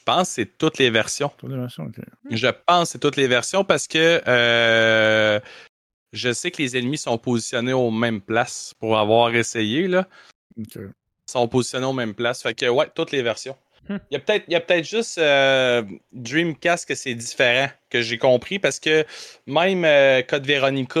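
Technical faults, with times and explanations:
No technical faults are audible anywhere in this speech.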